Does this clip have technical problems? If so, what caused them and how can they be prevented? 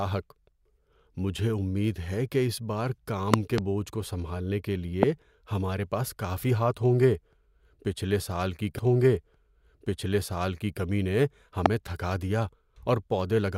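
Yes. Loud pops at 3.34–3.60 s (two in quick succession), 5.03–5.05 s and 11.66–11.68 s sit about 25 dB above the speech, likely voltage steps from a plug, switch or static. Each shows as a tall spike on the waveform and a thin vertical broadband stripe on the spectrogram. Securing connectors, avoiding switching during recording, and grounding against static would prevent them.

A stream segment repeated from 8.78 to 10.80 s: the player queued the same 2-second chunk twice, with a small blip at the jump back. On a spectrogram, the same pattern appears twice in a row. Tracking segment sequence numbers in the player and discarding duplicates would prevent this.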